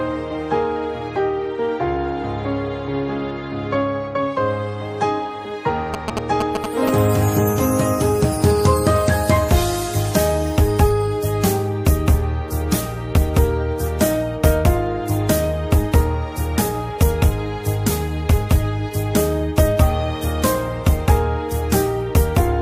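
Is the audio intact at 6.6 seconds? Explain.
No. GSM signalling bursts run from 5.94 to 6.89 s: a nearby 2G phone's short groups of radio bursts are rectified by the audio circuit, giving a galloping pattern of short 217 Hz buzzes roughly as loud as the recording itself.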